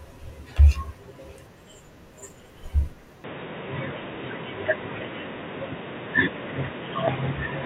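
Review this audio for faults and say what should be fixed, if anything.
From 3.24 s onward, the speech turns abruptly dull and boxy, with nothing above 3.8 kHz and a level shift of about 5 dB. This is likely the input switched to a poorer device. Pin the recording input to a fixed microphone so the system cannot change devices mid-take.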